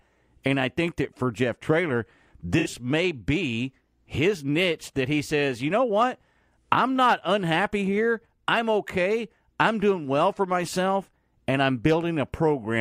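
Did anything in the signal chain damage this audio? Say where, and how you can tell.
Yes. Codec: AAC frame loss with concealment at 2.59–2.66 s, before "may be his niche". The decoder reuses old spectrum, leaving a 64 ms smeared spectrogram patch.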